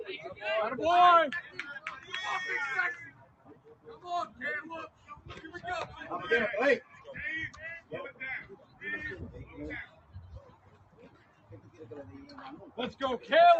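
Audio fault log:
Throughout: noise suppressor applied to music or sounds. A speech-tuned suppressor mistakes steady tones and tails for noise. Levels swing by about 15 dB, so the sound pumps and thins.
3.11–4.04 s, 4.88–5.28 s, 6.84–7.08 s, 8.49–8.82 s, 9.86–10.15 s, 10.4–11.86 s: sound cut by the noise suppressor. Held and fading sound sinks by about 8 to 12 dB. Decays end early while attacks survive.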